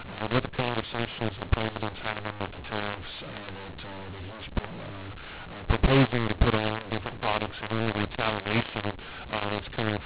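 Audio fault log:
Throughout, mu-law and A-law mixed up: speech coded as G.711 mu-law is decoded as A-law, scrambling sample levels so some come out too loud and others too quiet. Near-silent samples are lifted well above silence, making the speech harsh and distorted and filling pauses with noise.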